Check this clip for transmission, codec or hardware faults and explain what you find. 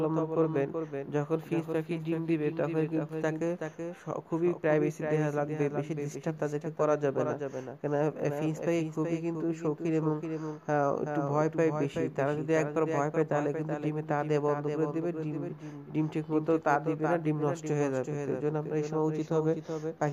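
One fault runs throughout: a doubled audio track. A full-band copy trails about 0.4 s behind, a few dB quieter, with no decay, most likely from a second, slower capture path. On a spectrogram every event appears twice, identically shaped.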